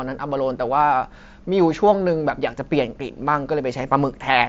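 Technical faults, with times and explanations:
Nothing here stands out as a technical fault; the speech just comes through a wideband Bluetooth headset link running mSBC, which carries it up to about 8 kHz.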